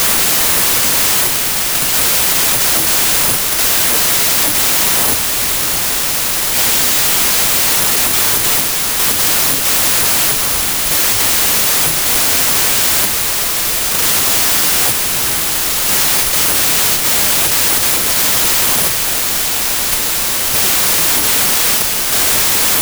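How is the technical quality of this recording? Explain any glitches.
Poor: a wrong sample width corrupts the whole recording. The playback reads the data with fewer bytes per sample than were written, consistent with 32-bit data taken as packed 24-bit. Most values mix mismatched bytes, so loud noise buries the speech, which plays at 0.75 times speed and correspondingly lower pitch throughout.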